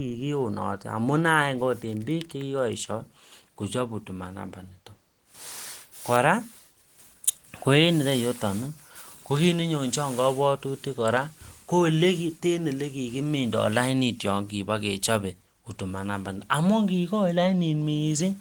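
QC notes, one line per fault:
No faults heard in this speech clip; Opus voice coding at 20 kbps in hybrid mode keeps the band open to about 20.1 kHz.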